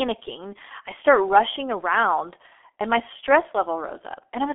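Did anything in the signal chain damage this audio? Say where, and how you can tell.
Yes. The codec stage did it, across the whole clip. The speech is dull and hoarse from start to finish, with nothing above 3.6 kHz and a telephone-style band of roughly 300 Hz to 3.4 kHz. Consonants smear together as well. That's the G.723.1 codec squeezed hard, and the damage fits its low-rate mode of around 6 kbit/s. It rebuilds the voice from a coarse model refreshed in 30 ms chunks, so fast detail like sibilants and onsets just gets averaged away.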